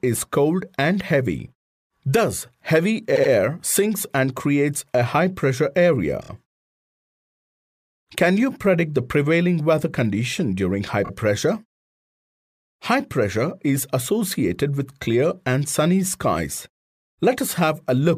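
Repeated frames: short blocks of compressed audio were decoded more than once, producing stutters. This happens at 3.15–3.31 s (a 78 ms block, twice extra), 6.21–6.29 s (26 ms, three times extra) and 11.04–11.10 s (26 ms, twice extra).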